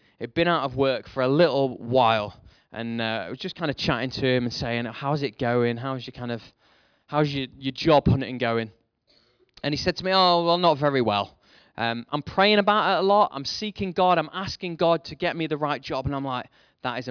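No dropouts, clicks, distortion or timing errors can be heard anywhere in this speech recording.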